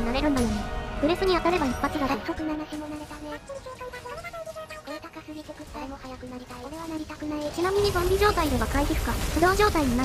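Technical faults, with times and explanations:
2.04–2.97 s, zipper noise: the level drops about 15 dB in unsmoothed 3 dB jumps, roughly five a second, so each jump leaves an audible tick.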